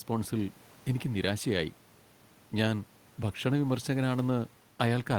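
No technical faults can be heard anywhere in the recording.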